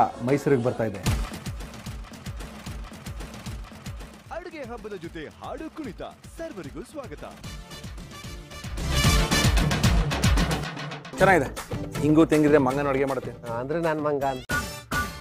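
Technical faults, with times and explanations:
12.56–13.44 s, zipper noise: the level drops by roughly 10 dB in unsmoothed 3 dB steps, about four per second, so each jump leaves a small click and a ticking rides on the sound.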